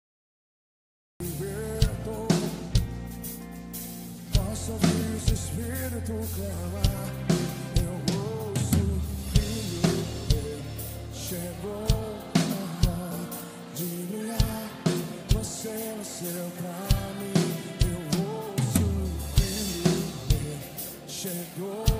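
The clip opens with a cut-off start. Digital silence runs from 0 to 1.20 s. The sound then appears abruptly, already mid-way through. Capture evidently began late, so the real onset was lost. There is no natural attack or fade-in.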